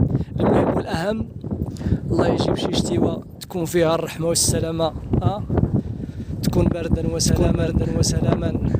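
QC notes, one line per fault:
6.96 s to end, doubled audio track: A second full-band copy of the sound starts abruptly here and runs to the end, following about 0.7 s behind the original. It is roughly as loud as the original. It has no decay and no room colour, so it reads as a clean duplicate rather than an echo. The likely cause is a second, slower capture path or an edit that left two copies out of step.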